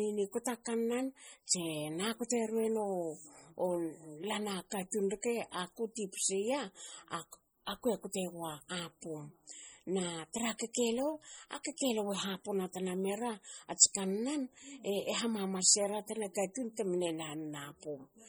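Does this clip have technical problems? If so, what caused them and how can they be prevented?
Yes. Throughout the speech the sound is watery and swirly, with s sounds turning metallic and chirpy. This is likely heavy MP3 compression, fitting a bitrate near 32 kbps. Weak frequency lines are zeroed and flicker between frames, and that flicker separates it from a plain low-pass filter. Encoding at 128 kbps or higher, or keeping an uncompressed master, prevents it.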